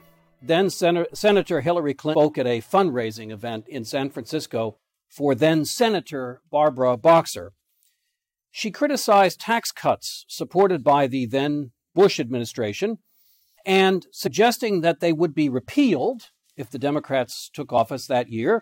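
At 14.26 s a brief glitch cuts through the sound. It is damaged data in a compressed stream. Bytes in the encoded file are wrong at that point. The decoder misreads the frame and loses its place. It then hunts for the next valid frame header and carries on. The glitch lasts only about 20 ms. A second, shorter blip follows at 17.77 s. It has the same cause.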